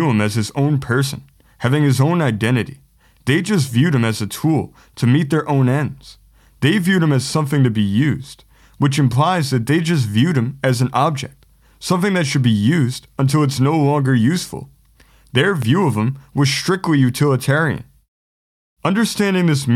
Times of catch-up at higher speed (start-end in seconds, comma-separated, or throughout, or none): none